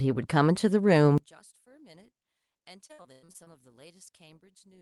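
From 1.18 s to the end, the speech drops by about 32 dB into a faint residue, likely one channel inverted cancelling in mono; the waveform collapses and the spectrogram empties.

Between 2.63 and 3.48 s, repeated packet loss gives choppy, robotic speech: eight patched gaps up to 99 ms show as smeared, stretched bands covering about a third of that stretch.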